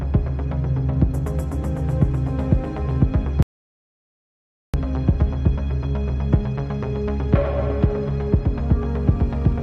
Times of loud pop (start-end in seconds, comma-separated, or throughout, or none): none